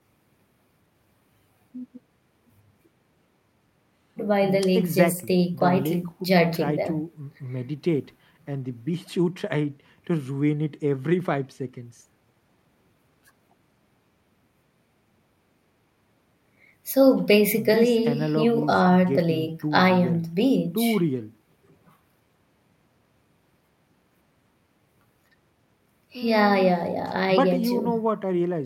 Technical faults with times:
none

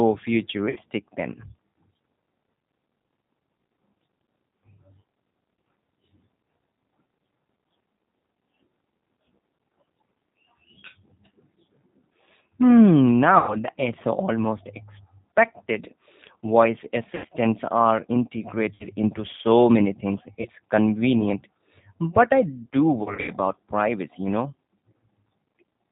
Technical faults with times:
0.00-25.92 G.729 codec
0.70-0.78 VoIP packet loss concealed by the speech codec
13.39-13.56 VoIP packet loss concealed by the speech codec
17.15-17.26 VoIP packet loss concealed by the speech codec
18.74-18.87 VoIP packet loss concealed by the speech codec
20.42-20.48 VoIP packet loss concealed by the speech codec
23.03-23.32 VoIP packet loss concealed by the speech codec

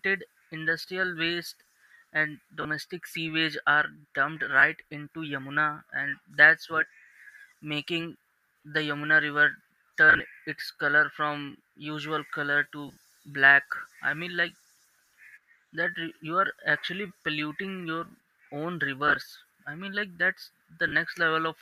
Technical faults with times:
0.82-0.84 lost LE Audio frames
2.62-2.65 lost LE Audio frames
4.60-4.63 lost LE Audio frames
10.10-10.20 lost LE Audio frames
12.88-13.01 lost LE Audio frames
19.08-19.16 lost LE Audio frames
20.88-20.92 lost LE Audio frames

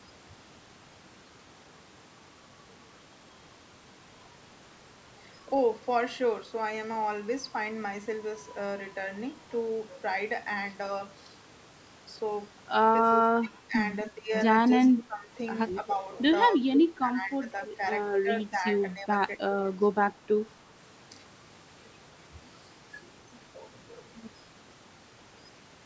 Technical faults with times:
13.22-13.75 speech suppressed in double talk
14.11-14.30 speech suppressed in double talk
14.92-15.34 speech suppressed in double talk
15.74-16.01 speech suppressed in double talk
16.58-17.45 speech suppressed in double talk
17.63-17.67 echo leak
18.23-18.64 speech suppressed in double talk
18.94-19.09 speech suppressed in double talk

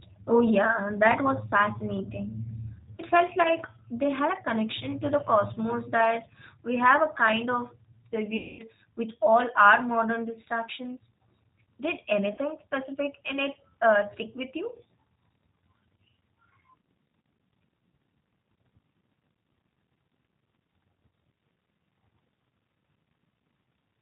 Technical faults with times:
0.00-24.01 G.729 codec
3.43-3.55 VoIP packet loss concealed by the speech codec
8.37-8.63 VoIP packet loss concealed by the speech codec
12.34-12.39 VoIP packet loss concealed by the speech codec

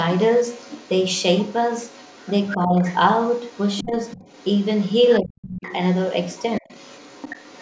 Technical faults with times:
0.16-2.54 other side's voice leaking through
2.57-2.83 speech suppressed in double talk
2.85-5.15 other side's voice leaking through
3.82-3.94 speech suppressed in double talk
5.20-5.72 speech suppressed in double talk
5.62-7.61 other side's voice leaking through
6.60-6.74 speech suppressed in double talk

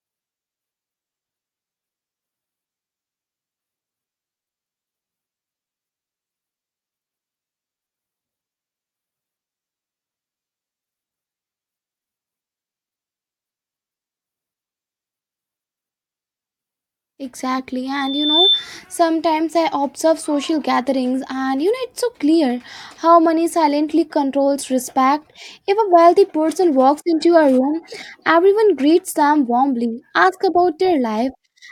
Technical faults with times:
17.94-18.69 loudspeaker feedback squeal

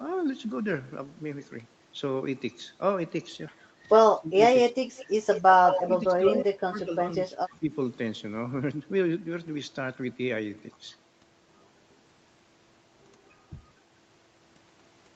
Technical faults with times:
4.15-4.77 speech suppressed in double talk
4.97-5.89 echo leak
5.85-7.72 speech suppressed in double talk
6.27-6.44 echo leak

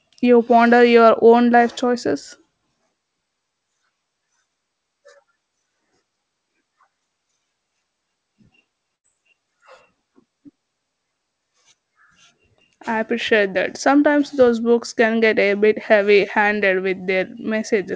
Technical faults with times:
8.96-9.07 burst of packet loss

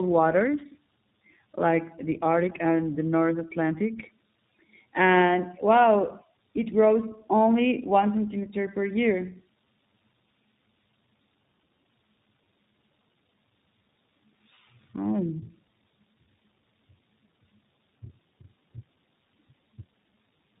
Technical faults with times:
0.00-20.60 tandem speech coding

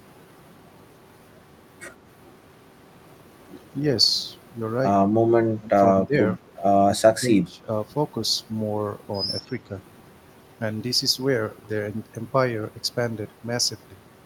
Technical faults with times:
5.55-6.48 speech suppressed in double talk
6.85-7.68 speech suppressed in double talk

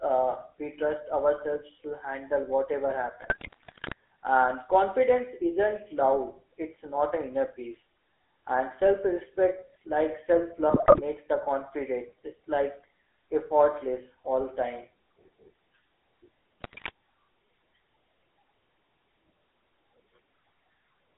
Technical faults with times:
0.00-21.18 GSM full-rate codec
3.22-3.93 GSM bit errors
10.70-11.02 GSM bit errors
16.61-16.90 GSM bit errors

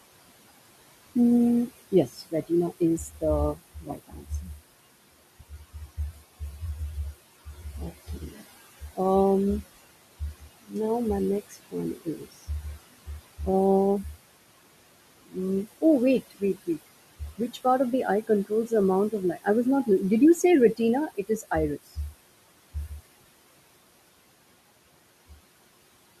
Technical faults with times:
0.00-26.20 noise suppressor artifacts
1.15-4.59 speech cut by the noise suppressor
5.40-6.62 speech cut by the noise suppressor
7.45-8.99 speech cut by the noise suppressor
10.20-10.75 speech cut by the noise suppressor
11.50-12.49 speech cut by the noise suppressor
15.26-19.88 speech cut by the noise suppressor
20.43-21.97 speech cut by the noise suppressor

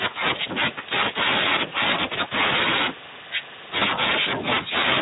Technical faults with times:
0.00-5.01 Speex codec
1.69-1.74 VoIP packet loss concealed by the speech codec
3.79-3.84 VoIP packet loss concealed by the speech codec

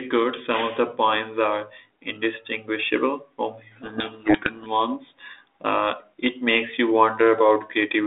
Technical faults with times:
3.72-4.72 codec payload misread

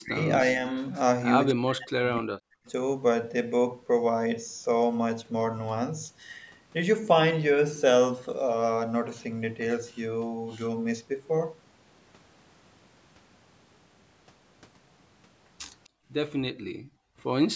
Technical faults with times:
0.00-0.65 speech suppressed in double talk
1.53-2.64 speech suppressed in double talk
15.84-15.89 echo leak
15.89-16.10 background gated by the echo canceller
16.54-17.19 background gated by the echo canceller

